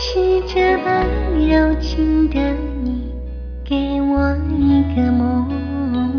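No technical faults can be heard anywhere in this clip.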